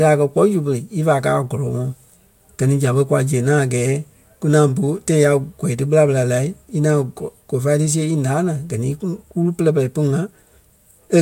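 No technical faults can be heard anywhere in the recording.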